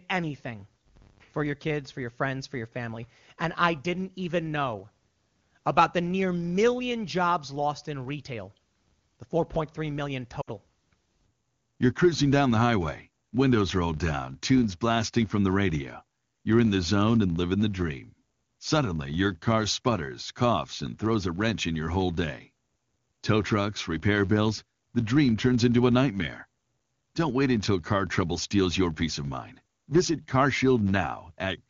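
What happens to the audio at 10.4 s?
From 10.41 to 10.49 s the speech suffers lost AMR speech frames. About 60 ms of coded speech fails to arrive intact, which fits three 20 ms frames. The AMR-WB decoder fills the hole by repeating the last good pitch and vocal tract settings at falling gain, so the sound smears, wobbles and sags briefly before recovering slightly rough. Unlike a plain dropout, the gap is first filled with a fading echo of the preceding sound, which drops to near silence within two frames.

The filter restarted on every block also affects this moment, as it does the whole clip. Each block starts from zero state, leaving a small transient at a steady 100 Hz that is heard as a buzz rising and falling with the speech level. Unlike the frame loss, it does not come and go as a single event.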